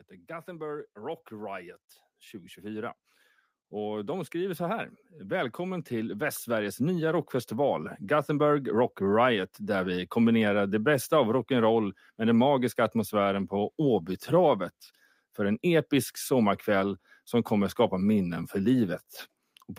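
From 0.27 to 3.02 s, automatic gain rising lifts the level by about 5 dB. The gain control judged the input too quiet and turned itself up gradually. Voice and background swell together. It recurs from 3.69 to 8.79 s, climbing about 10 dB.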